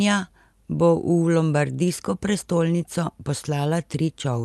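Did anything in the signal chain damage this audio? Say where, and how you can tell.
No, nothing in the chain damaged this speech; it just went through an ordinary call path, and the top end tapering off around 12 kHz is what you'd expect from an Opus-coded call doing its normal job.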